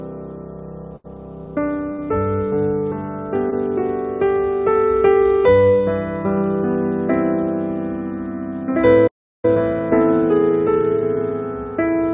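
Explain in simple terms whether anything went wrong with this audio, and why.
Three short stalls from a late packet occur at 0.96–1.06 s, 1.92–2.00 s and 3.50–3.54 s. Each time, the receiver held the last sound for about 83, 61 and 15 ms until the packet arrived.

A playback stall cuts the sound to silence from 9.07 to 9.45 s, about 0.36 s. The player likely ran out of data.

Time-compressed catch-up follows from 9.45 s to the end. The player trims small pieces to recover lost time, so the audio runs about 1.1 times faster at the same pitch.

The call path itself, which passes nothing above 4 kHz, is not a fault.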